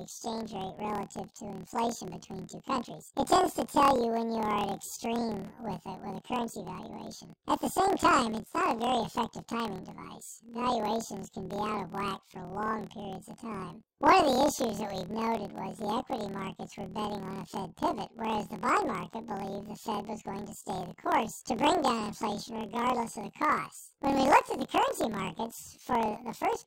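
Throughout this speech clip, planar audio is read as interleaved: each 26.12 ms block, holding all left samples then all right, is taken as alternating pairs. Every block plays twice at double speed, so the speech sits an octave high with a rough flutter at 38.3 Hz.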